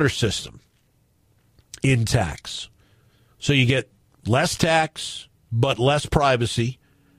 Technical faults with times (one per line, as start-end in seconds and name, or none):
6.73-6.76 corrupt frame decoded